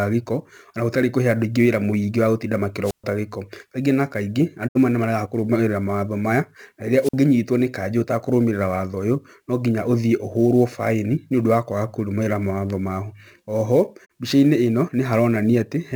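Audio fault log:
Throughout: sample clock jitter. A fine roughness and hiss rides on the speech, strongest on loud passages and bright, high-frequency sounds, and gone in the pauses. The converter's clock wanders by something like 10 microseconds rms, so each sample is captured slightly off its intended instant. The resulting error scales with how fast the waveform is changing, which is why it tracks level and treble. The error sits roughly 30 dB below the signal.
2.83–3.04 s and 7.01–7.14 s: wireless microphone squelch dropout. Each event starts with a short swell of hiss as the FM radio link weakens. The receiver's squelch then shuts the output, leaving a hole of near silence, about 129 ms in the first event and about 50 ms in the second. The speech comes back as the signal recovers. The weakening carrier raises the noise first, and the squelch gate produces the mute.
4.67–4.77 s and 14.04–14.12 s: digital broadcast dropout. 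The speech fades over about 20 ms into clean silence with no hiss, then resumes further on. Audio is missing, 64 ms in the first hole and 32 ms in the second, which fits the loss of two 32 ms frames and then one. The receiver muted until valid frames arrived again, so the speech carried in that interval is simply absent.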